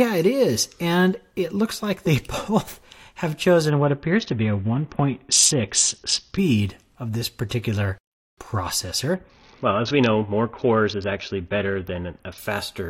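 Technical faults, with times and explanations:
3.69–6.38 s and 9.14–12.38 s, Bluetooth SBC bit pool drop: the speech loses its treble and turns gritty, then recovers. Starved of bits, the encoder gives the top sub-bands few or no bits and quantises the rest coarsely, which fits a bit pool cut from 28 to 6, around 60 kbps.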